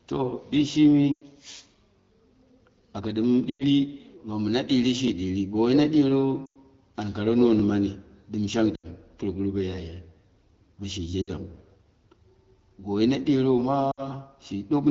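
Lost AMR speech frames: corrupted radio frames were discarded, and the decoder extrapolated from the last good frame with fading gain. At 1.12–1.24 s, 3.49–3.64 s (after "aka ɗom"), 6.46–6.59 s (before "an kare"), 8.75–8.87 s (between "dɨm shang" and "pmoguru bo"), 11.21–11.30 s and 13.91–14.06 s, the wideband speech smears, fades out for 60–100 ms, and returns weak.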